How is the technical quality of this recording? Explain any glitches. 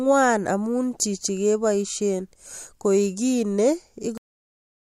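The recording has one clear fault: a cut-off end. At 4.18 s the speech stops abruptly in the middle of a sound, with no natural decay or fade. The audio drops straight to digital silence, which lasts the remaining 0.8 s or so. The cause is that the final stretch of audio buffers was never written to the file or played out, so the sound was truncated at that point rather than allowed to finish.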